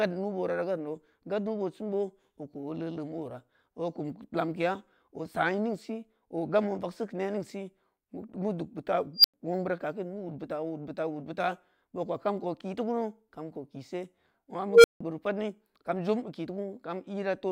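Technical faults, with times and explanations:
9.16–9.34 s and 14.68–15.01 s, unstable filter: a runaway recursive filter swells a tone (around 5 kHz, then around 500 Hz) to clipping within 79 and 156 ms, then cuts to silence for 95 and 165 ms. A spectrogram shows a brightening horizontal line, then a blank gap. The waveform shows a swelling envelope that clips, then flat.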